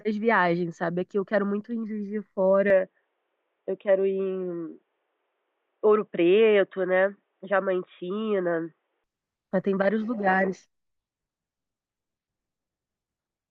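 At 2.70 s the speech turns dull and boxy. Nothing above 3.8 kHz remains. There is no gap, and the level holds steady. Faint new background noise sits far below. The likely cause is an input switched to a poorer device. Full clarity returns at 9.04 s.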